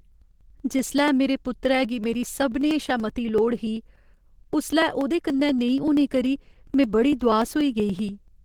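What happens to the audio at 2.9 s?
At 2.9 s the speech falls inside a run of periodic USB or driver dropouts lasting from 0.12 s to 8.38 s. Every 0.096 s a stall skips a few milliseconds of audio, producing regular ticks only while there is sound. The waveform shows small splices at even spacing, and the spectrogram shows thin vertical lines.

The same moment sounds hoarse, grainy and muffled, which is likely Opus compression running in its hybrid speech mode at a low rate that fits about 16 kbps. The spectrogram shows energy reaching about 20 kHz but smeared and noisy within bands.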